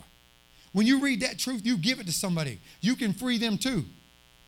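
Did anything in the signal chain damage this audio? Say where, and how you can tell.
Yes. A mains buzz sits under the speech for the whole clip, in the analogue wiring. It is a steady, raspy 60 Hz buzz, roughly 35 dB below the speech, with harmonics up into the kilohertz range. Sharp switching spikes twice per mains cycle, from a dimmer, rectifier or unshielded run, are leaking into the line.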